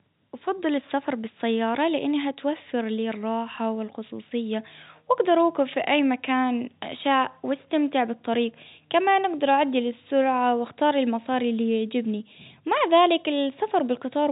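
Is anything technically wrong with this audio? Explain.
No, nothing stood out on listening to this speech beyond the narrow band expected of an ordinary telephone line.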